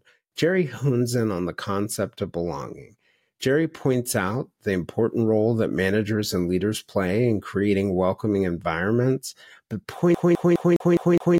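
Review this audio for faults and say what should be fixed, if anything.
CD stuck on one turn, 10.15 to 11.38 s: right after "creating welcoming environments but", a scratch sends the laser back one track each revolution, so the same 0.21 s of speech plays six times, each jump marked by a brief mute. Re-rip from a clean or resurfaced disc using a secure extraction mode that rereads and verifies damaged sectors.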